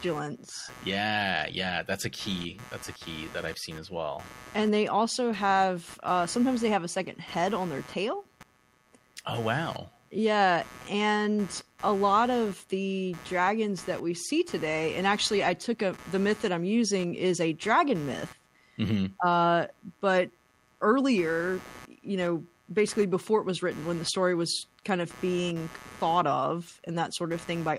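A speech recording with a buzzy, chirping layer running under it from start to finish, pulsing at around 150 times a second and sitting roughly 20 dB below the speech. The buzz rises and falls on its own schedule rather than following the talking, which marks it as computer activity noise: changing load on the processor, graphics card or mouse disturbs the ground shared with the audio circuit, and that current feeds straight into the recording.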